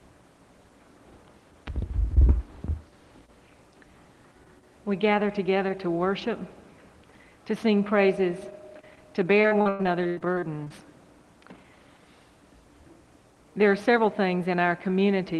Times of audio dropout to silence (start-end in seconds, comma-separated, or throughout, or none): none